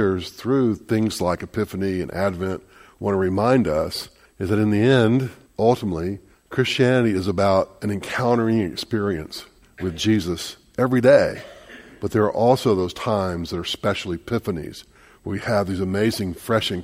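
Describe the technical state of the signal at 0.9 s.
At 0.9 s the signal carries clock slip clicks, running from 0.11 s to 16.8 s. Faint ticks repeat about every tenth of a second. The likely cause is two unsynchronised clocks around 200 ppm apart, forcing single-sample drops or repeats.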